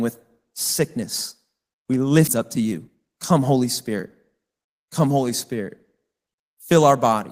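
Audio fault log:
2.27–2.29 s, skip ahead: Later speech was already queued, so a stretch of roughly 0.7 s was discarded in transit or when the jitter buffer overflowed. Nothing was generated to fill the hole, so playback jumps straight from the audio before the cut to the audio after it. The listener hears an abrupt splice where part of the speech is simply gone. The delay drops by about the same amount in one step.
2.37–4.75 s, jitter buffer speed-up: Even after the jump, the buffer still held more audio than its target, so the receiver kept trimming short pieces one or a few pitch periods long, many times in succession. Altogether around a third of a second is removed, and the speech plays at about 110% speed. Because whole pitch periods are dropped rather than the playback rate being raised, the pitch stays the same while the talking sounds hurried until the buffer settles.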